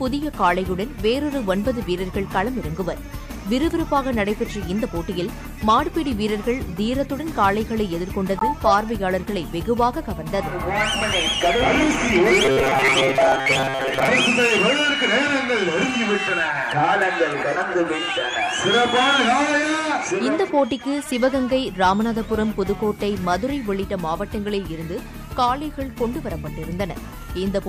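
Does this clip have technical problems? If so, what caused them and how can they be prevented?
Yes. Robotic sound from repeated short buffers runs from 12.45 to 14.08 s, where the sound turns into a rigid, metallic buzz at 134 Hz that only loosely follows the original. The likely cause is new audio arriving too seldom, so the software kept replaying a fragment of about 7.5 ms, one over 134 Hz, while most of the real audio in that stretch was skipped. Larger jitter buffers and steadier delivery of audio blocks prevent it.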